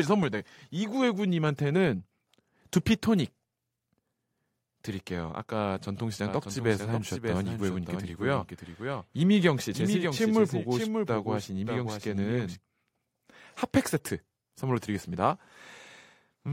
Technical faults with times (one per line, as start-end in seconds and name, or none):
6.28-12.56 doubled audio track